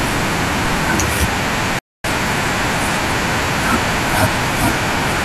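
A playback stall cuts this speech clip to silence from 1.79 to 2.04 s, about 250 ms, likely because the player briefly ran short of data before resuming.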